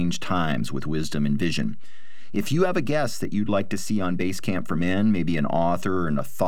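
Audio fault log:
Throughout, DC offset: the whole speech waveform sits shifted off zero by about -25 dBFS, which you don't hear but which eats headroom and parks steady energy at 0 Hz.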